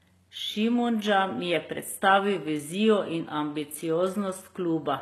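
Throughout the speech runs plainly audible damage, likely from HE-AAC compression at a very low bitrate near 16 kbps. The treble is copied up from lower bands rather than coded, so s sounds turn gritty and metallic. A spectrogram shows blurred upper bands ending abruptly at 12.3 kHz.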